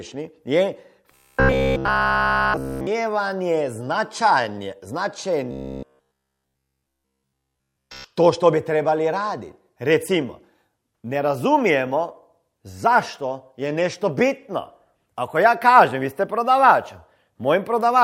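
From 1.1 to 2.9 s and again from 5.5 to 8.0 s, the speech goes robotic: a rigid 66.8 Hz buzz, likely from one roughly 15 ms buffer repeating nonstop.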